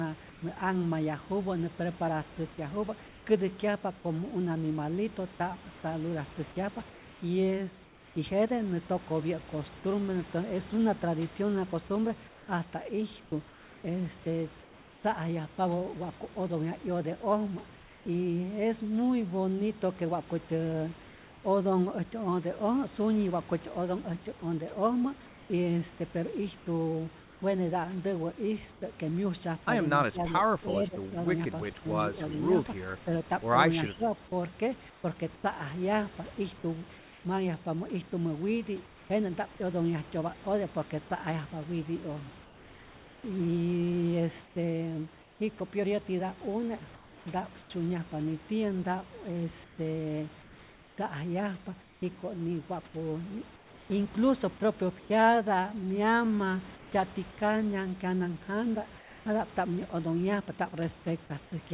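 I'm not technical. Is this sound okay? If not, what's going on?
No. From 0.3 to 8.2 s and again from 34.9 to 39.1 s, the real room sound is likely swapped for a flat, featureless hiss. This is comfort noise in place of the background.

At 5.36 to 5.40 s, a tiny piece of speech vanishes into that hiss. It is sound dropped by the voice detector, which likely mistook it for silence.

From 12.3 to 18.1 s, 24.4 to 28.8 s and 42.4 to 59.3 s, the speech sounds choppy. It is sound chopped by the voice detector, which likely kept switching off and on.

At 30.03 to 30.20, 30.64 to 31.21, 31.64 to 31.87, 32.30 to 32.56, 33.04 to 33.12 and 33.95 to 34.12 s, the voice briefly dips. This is speech suppressed in double talk, likely from both sides talking at once.

At 32.28 to 32.32 and 33.89 to 33.94 s, a faint copy of the voice returns about a third of a second late. This is an echo leak, likely from a loudspeaker.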